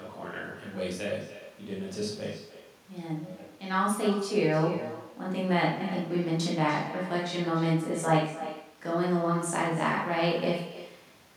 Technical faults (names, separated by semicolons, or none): echo with no canceller